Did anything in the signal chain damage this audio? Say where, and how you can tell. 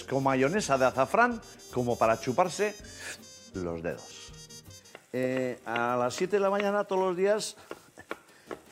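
No, nothing along the chain has left a mark on this one; the audio sounds just the way it went in, with no damage to point to at any stage.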